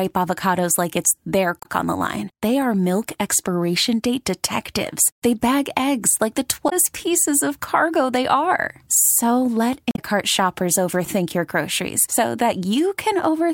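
Damaged data in a compressed stream hits the speech three times: 1.58 to 1.66 s, after "avocados like it's their"; 6.66 to 6.73 s, after "bag eggs like the"; and 9.90 to 9.99 s, just before "shoppers overthink". Each time the decoder misreads corrupted frames and loses sync until it finds a valid header, giving a brief disruption of under 0.1 s. On a spectrogram each appears as a narrow vertical disturbance, and the waveform shows an abrupt discontinuity.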